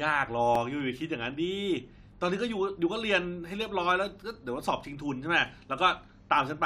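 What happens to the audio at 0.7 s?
CD scratch ticks run through that moment, spanning 0.31 to 1.05 s. A blemish on the disc destroys more data than the error correction can rebuild, and the damage comes round once per revolution, so the player interpolates or mutes the unrecoverable samples each time. The result is four short ticks, roughly five per second, the longest only a couple of milliseconds, heard as clicks of uneven strength or micro-dropouts in the speech.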